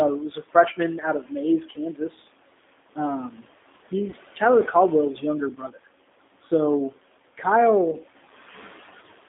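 Right from the start, the whole speech clip runs through a G.729-style codec, and you can hear it. The band stops around 3.6 kHz at the top and thins out below about 250 Hz, and the voice has that slightly rough, synthetic edge you get when speech is rebuilt from a vocal tract filter, a pitch predictor and a handful of pulses per frame rather than carried as a waveform. The damage is plainly audible, which fits a low rate of around 8 kbit/s.

A noise suppressor is also working the whole way through. The room noise, which sits about 18 dB under the speech, gets pulled down by roughly 17 dB in the gaps and then comes back up under each phrase, because the suppressor is deciding band by band, frame by frame, what counts as noise.

That same suppressor also misjudges some of the speech itself. Between 0.29 and 0.55 s it clips the speech by up to about 11 dB. From 0.98 to 1.33 s the dip goes to about 15 dB, and from 1.64 to 2.02 s to about 16 dB. 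Each time, a couple of hundred milliseconds or so of soft sound gets ducked along with the background, and the quieter bits come across as swallowed. It happens once more at 5.56 to 5.78 s, dipping by up to about 12 dB.

There are two short packet-loss gaps that the codec conceals, one at about 4.10 to 4.15 s and another at 7.91 to 7.96 s. Each covers about 20 ms of lost packets. The decoder fills the hole by extrapolating from its last pitch and filter settings while fading the level, so you get a brief stretched, fading sound. Because each frame builds on the one before, the voice stays weak or distorted for a moment after the real audio resumes.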